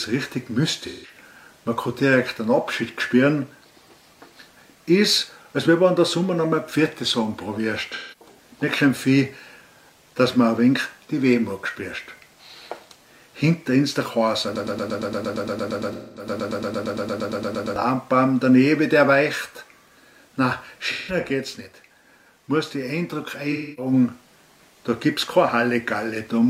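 AAC frame loss with concealment occurs at 0.86 to 1.15 s, 7.95 to 8.39 s, 15.92 to 16.28 s, 20.91 to 21.20 s and 23.52 to 23.92 s. Each time, the decoder replaces missing frames by reusing the last good spectrum, which leaves a short smeared, noisy patch. The gaps run from about 170 to 256 ms, fitting four to six lost frames. At 7.95 s the loss is scattered over about 430 ms, with the longest run around 150 ms.

A broken-record loop runs from 14.56 to 17.76 s. A 115 ms fragment repeats back to back about 28 times, and the audio that should have played there is lost. The likely cause is a stalled player or stream resending its last buffer. The concealment patch at 15.92 s falls inside this loop.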